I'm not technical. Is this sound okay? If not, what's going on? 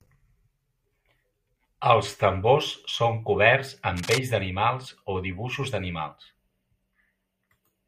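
No. From 3.97 to 4.19 s, after "tambors són coberts", a fairly loud scratchy rustle covers the speech: cable scratch noise, likely from a worn cable or connector being moved.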